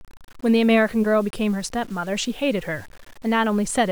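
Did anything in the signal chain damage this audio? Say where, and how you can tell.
Yes. Low bit depth without dither runs throughout: grainy distortion tracks the speech roughly 30 dB down, likely from a sample-format conversion truncating to about 7 bits.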